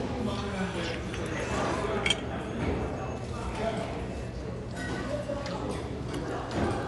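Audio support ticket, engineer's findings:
Dull, band-limited top end across the whole clip, nothing above about 11.4 kHz, plus rough, fluttery noise hanging around the tonal bits of these everyday sounds. Plainly audible, start to finish. Likely Dolby Digital compression at a starved rate, something like 64 kbps: encoder chops the band and leaves many frequency lines with no mantissa bits, decoder patches them with dither noise, hence the grit.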